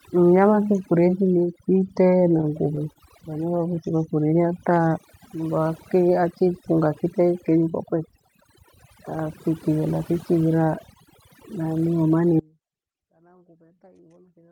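A speech recording with overdone noise removal throughout. The noise reduction was set too strong. It cuts frequency bands it mistakes for noise, taking quiet parts of the voice with them. The background drops and breaks up into twinkling specks. Right after "kite na", from 2.41 to 2.98 s, there are repeated stalls (stutter). Packets arrived late, so the jitter buffer kept running dry. The receiver stretched the last sound across several short gaps, the longest 29 ms, about 62 ms in all. Nothing is lost, but the audio drags and catches. Two jitter buffer slow-downs follow, at 4.21 to 4.90 s and 5.36 to 5.69 s. The buffer was low, so the receiver repeated single pitch periods to build a reserve. It added 48 ms and 50 ms. Playback falls to 94% and then 87% speed at unchanged pitch, so sounds are drawn out. A jitter buffer speed-up runs from 7.70 to 8.53 s. The buffer held too much audio, so the receiver trimmed short pitch-period pieces, about 70 ms in total. 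Speech runs at 106% speed with unchanged pitch and sounds slightly hurried. At 12.39 s the audio cuts abruptly to a faint residue until the end. Only a faint trace of the signal remains, about 35 dB down. This is likely an audio dropout where the path after the break stayed live.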